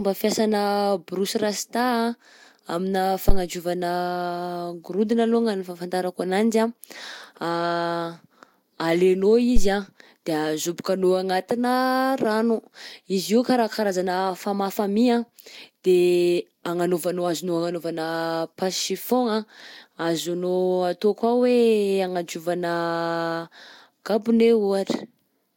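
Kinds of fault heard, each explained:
Phantom power thump: switching phantom supply on a live input sends a DC step through the coupling capacitors, giving two short deep thumps, each dying away in about 30 ms.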